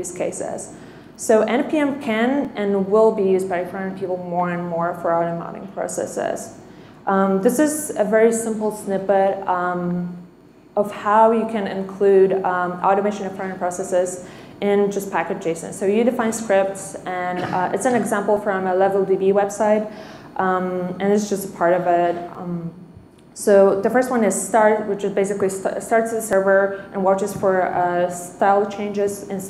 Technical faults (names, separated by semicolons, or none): audio missing between chunks